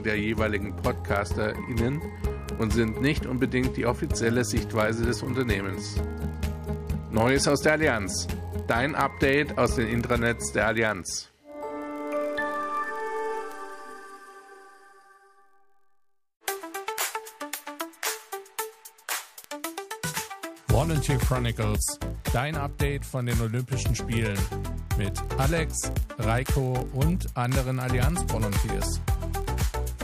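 From start to finish, a block size mismatch (padded) runs through the audio. One stage hands over blocks slightly shorter than the next stage reads, which fits a 1024-sample read block, and the shortfall in each is filled with silence. That tiny gap repeats at 43.1 Hz, so a low buzz sits under the sound the whole time. Because the padding stretches the stream, playback runs at 0.999 times normal speed, too slight to hear as drag, with pitch essentially unchanged.

On top of that, five bit error spikes land at 2.49, 13.52, 19.44, 20.90 and 26.46 s. Each is a single flipped bit in stored or transmitted data that throws a sample's value off by a power of two before it snaps back. The one at 2.49 s spans a few consecutive samples, and the others hit a single sample. Each is heard as one sharp, broadband tick with no relation to the surrounding sound.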